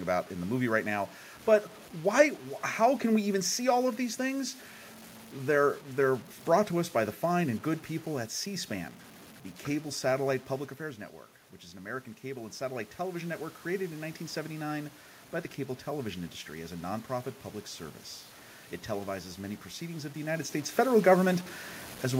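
Throughout, the speech sounds gritty, with quiet passages breaking into grainy distortion, likely from low bit depth without dither, roughly 7-bit truncation. The waveform shows visible stair-steps, and the spectrogram shows signal-following hash.

From 11.72 to 13.43 s, between "which is" and "created in", automatic gain rising lifts speech and room noise by 6 dB, following a 9 dB input drop; the waveform envelope swells gradually.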